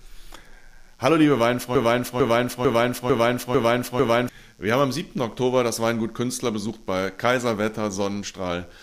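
A faint, raspy mains buzz sits under the speech the whole way through, built on 60 Hz harmonics and roughly 40 dB down. From 1.75 to 4.29 s there's a broken-record loop: a 0.45 s fragment repeats six times back to back, likely a stalled stream resending its last chunk, so that stretch is lost.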